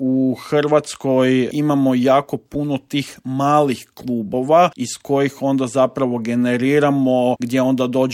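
Nothing in this audio stands out as a technical fault, so there's nothing here to flag or trace back to a cause.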